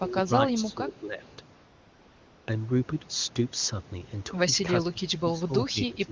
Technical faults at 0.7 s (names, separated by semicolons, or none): speech suppressed in double talk